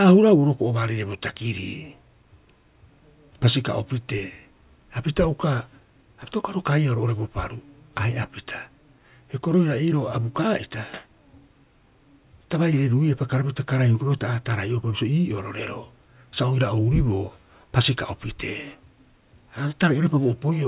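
No technical faults can be heard in the speech at any point.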